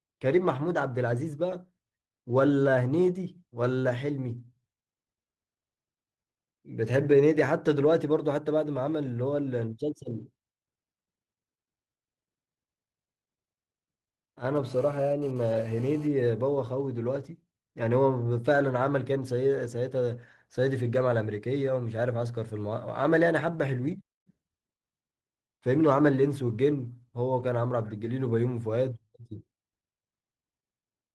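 A 2G handset close to the recording chain transmitted a burst of data from 14.56 to 16.07 s. Its radio pulses, arriving about 217 times per second, were rectified by the audio circuitry and turned into an audible signal. The result is a GSM phone buzz: a harsh, rasping tone at 217 Hz, rich in harmonics and about 24 dB below the speech, which appears abruptly, sits under the speech with no relation to it, and then stops.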